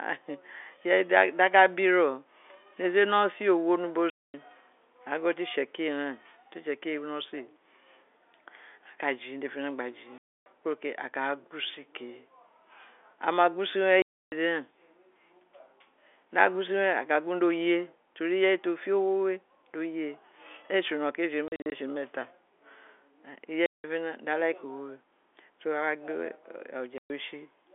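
Speech over a telephone-band line shows packet loss filled with silence: dead gaps at 4.1, 10.18 (just before "kuro ke a"), 14.02, 21.48 (several short holes spread over a quarter second), 23.66 and 26.98 s. Each gap lasts a multiple of 20 ms, which fits 20 ms packets. The hard edges and true silence, not smoothed or repeated sound, set this apart from concealed loss. The G.711 band limit to 3.5 kHz is the line's normal character.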